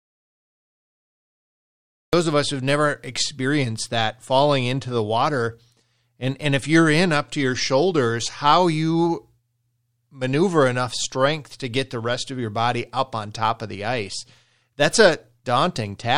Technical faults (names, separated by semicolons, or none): audio dropout to silence